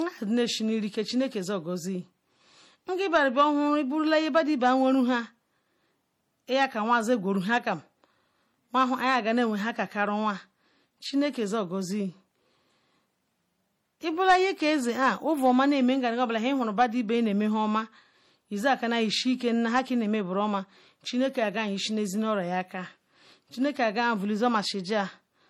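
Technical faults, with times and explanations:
Throughout, transcoding between lossy codecs: the speech carries two layers of coding artefacts at once, the different artefacts heard together. The likely cause is an MP3 encode followed by an HE-AAC re-encode, both at a rate that sounds like about 48 kbit/s. The second codec spends bits reproducing the first one's errors and adds its own, so they stack. Nothing remains above 20.3 kHz.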